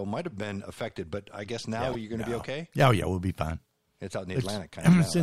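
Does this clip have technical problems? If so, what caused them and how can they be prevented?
Yes. Repeated frames at 1.92 to 1.95 s: a 26.1 ms compressed block, consistent with a single frame, was delivered twice, so the same slice plays again as a brief stutter. This lengthens the audio by 26.1 ms. To prevent it, have the writer or stream check frame sequence numbers and drop duplicates before they reach the decoder.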